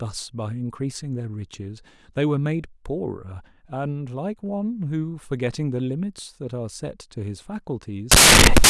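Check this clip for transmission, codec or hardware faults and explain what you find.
One fault appears at the end. From 8.12 s to 8.69 s, samples built from the wrong bytes turn the low bits into the high bits, giving loud, harsh broadband noise that fills the spectrogram.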